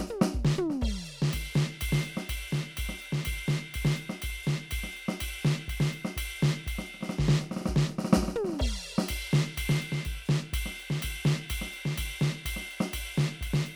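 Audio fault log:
Nothing to log here: the music carries on with no audible faults anywhere in it.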